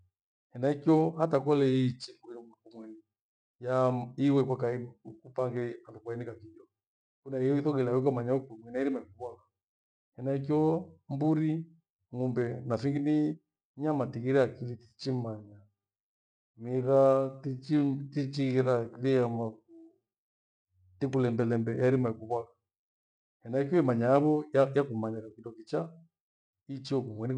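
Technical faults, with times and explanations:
14.75 to 20.69 s, time-stretched section: the speech abruptly slows to 0.65 times its pace yet keeps its pitch, so it drags, likely from software repeating short slices to fill a longer slot. A simple playback slowdown would have lowered the pitch as well.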